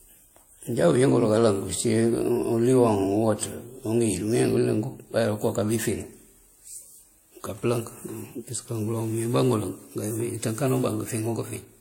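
From start to finish, the speech carries layered coding artefacts, likely from transcoding between lossy codecs: they fit an MP3 stage at around 64 kbit/s, followed by a WMA 1 stage at a similar rate that re-encodes those flaws and adds its own, the different artefacts heard together. A spectrogram shows nothing above 16.6 kHz, a hard ceiling kept through the chain, with blotchy, patchy upper bands beneath it rather than smooth texture.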